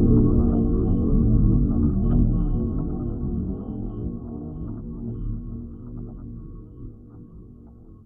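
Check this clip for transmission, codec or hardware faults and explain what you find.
Nothing here points to a transmission, codec or hardware problem; the audio comes through steady and intact the whole way, so there's nothing to flag.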